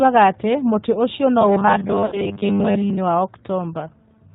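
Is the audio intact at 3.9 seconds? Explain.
No. At 3.9 s, as across the whole clip, G.729 codec damage is plainly audible. Speech rebuilt from a vocal-tract filter and sparse pulses sounds rough and synthetic, and a spectrogram shows nothing above 4 kHz.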